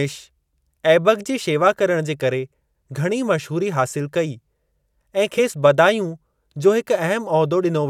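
At 7.59 to 7.61 s, compressed frames are skipped: roughly 20 ms of decoded audio is missing, so the speech jumps ahead.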